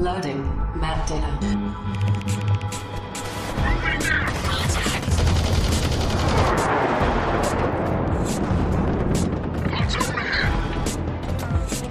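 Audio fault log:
No faults detected; no dropouts, clipping, timing errors or level disturbances heard anywhere in the clip.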